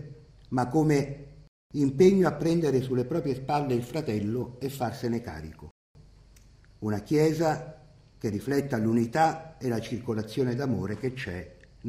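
At 1.47 s the sound cuts to silence until 1.71 s, and again from 5.71 s to 5.95 s: two rebuffering stalls of about 0.23 s and 0.24 s. Each time the player exhausted its downloaded audio and waited for more. What separates this from a dropout is the resumption: the sound picks up exactly where it halted, with nothing skipped, so the gaps add time rather than removing material.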